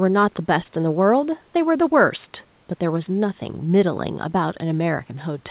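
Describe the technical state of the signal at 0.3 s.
At 0.3 s the speech is intact, with no fault, only the narrowband character of the call path, which carries nothing above 4 kHz, consistent with G.711 A-law coding.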